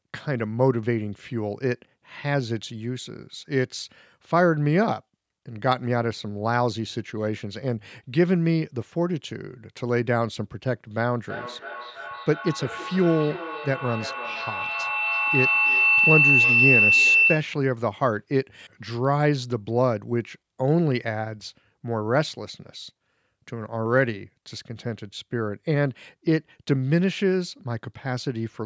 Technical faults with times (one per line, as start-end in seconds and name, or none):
11.26-17.69 feedback howl